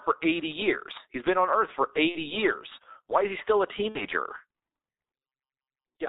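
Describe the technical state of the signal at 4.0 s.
At 4.0 s you're inside a burst of VoIP packet loss concealed by the speech codec, running 3.89 to 4.06 s, right after "is he still a". About 60 ms of audio went missing, which fits two 30 ms frames. The decoder stretches its last pitch and filter with falling gain, so you hear a fading buzzy tone or coloured noise that stays weak for a bit after packets return. Underneath it all is the G.723.1 codec at 6.3 kbit/s, heavily damaged here: nothing above 4 kHz and a slow-updating model, so the sound is muffled and hoarse with blurred consonants.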